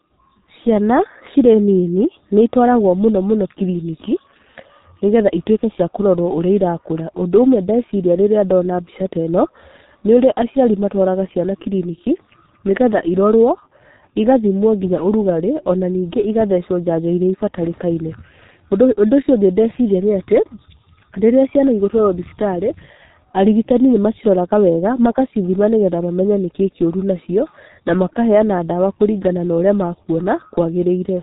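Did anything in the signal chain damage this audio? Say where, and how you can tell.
Yes. G.723.1 codec damage throughout: nothing above 3.8 kHz, heavy muffling and hoarseness, smeared consonants. The coarse 30 ms frame coding fits a 6.3 kbit/s low-rate voice stream.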